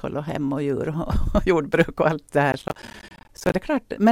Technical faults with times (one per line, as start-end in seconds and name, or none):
2.52-3.54 processor overload crackle